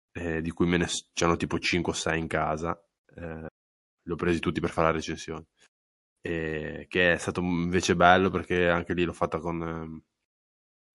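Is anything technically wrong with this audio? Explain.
Yes. MP3 compression runs throughout the speech: plainly audible codec damage, with watery, swirling texture as weak frequency lines drop in and out between frames. This likely comes from a low bitrate, around 48 kbps, leaving the encoder too few bits for the high band.

Pre-echo at 1.13 to 1.17 s: an attack arrives late in a transform block of about 48 ms, and without switching to short blocks the encoder spreads quantisation noise back over the quiet moment before it. A hiss rises about 14 dB for 32 ms ahead of the attack, which sounds smeared.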